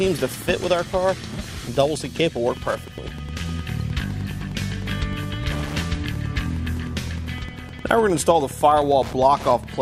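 Wi-Fi interference runs throughout the clip, from the first moment to the last. A Wi-Fi radio sitting close to the audio circuitry is transmitting its beacon every 102.4 ms, and the circuit rectifies those radio-frequency pulses into the audio band. The result is a steady, mechanical ticking just under ten times a second, sitting roughly 20 dB below the wanted sound and keeping its rhythm regardless of what the audio is doing.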